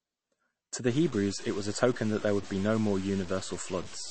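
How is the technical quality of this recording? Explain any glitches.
The technical quality is poor: the whole clip carries plainly audible compression damage, and from 0.87 s to the end a coarse grain sits on the speech as well.

MP3 compression runs throughout. Nothing is present above 8.3 kHz, so the speech sounds dull and boxed-in, and the upper band has a watery, swirling quality. The encoder likely ran short of bits, which fits a low bitrate around 32 kbps. It cut the treble at a fixed point and dropped weak frequency components, and those components flicker in and out from frame to frame. That flicker gives sibilants a metallic chirp and softens the onsets of syllables.

Low bit depth without dither starts at 0.87 s and continues to the end. The samples were likely truncated to very few levels, which points to about 6 bits, with no dither to randomise the rounding. The error therefore moves with the signal. 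It is heard as a gritty distortion roughly 20 dB below the speech that rises and falls with the voice, and the quietest passages break up into sputter or drop out.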